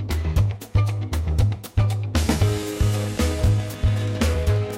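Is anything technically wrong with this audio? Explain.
Yes. From 2.23 s to 4.72 s there is a train of clicks: around twenty sharp, near-identical ticks at a steady 7.3 per second, peaking at about the level of the audio itself and audible over the pauses too. The likely cause is interference from nearby equipment or a faulty connection or power supply injecting repeated pulses. On a waveform they show as evenly spaced narrow spikes; a spectrogram shows a row of thin vertical broadband lines.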